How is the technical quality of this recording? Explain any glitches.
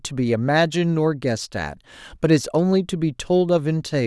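No glitches turn up anywhere in this recording. The speech runs continuously, with nothing breaking into or disturbing the sound.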